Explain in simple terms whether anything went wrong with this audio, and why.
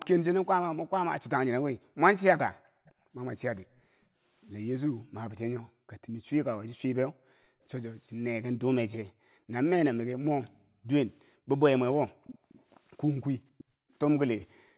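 Several things went wrong, and they come from the echo canceller of a call.

Background gated by the echo canceller: from 0.72 to 7.62 s, the room sound behind the speech keeps dipping to near silence, about two seconds in all. It happens again from 9.11 to 9.52 s, from 10.49 to 12.49 s, and from 13.57 s to the end. Each time, the canceller turned the microphone right down while the loudspeaker was playing. Unlike a dropout, the speech itself isn't lost. Only the background vanishes and then comes back.

Echo leak: a faint delayed copy of the speech trails the original by about half a second. It is very faint from 2.66 to 3.81 s, clearer from 12.24 to 12.63 s, and in between from 13.58 to 13.93 s. This is likely a loudspeaker's sound reaching a microphone and getting past the canceller. Room reverberation blurs sound straight away, but this comes back as a separate, later repeat.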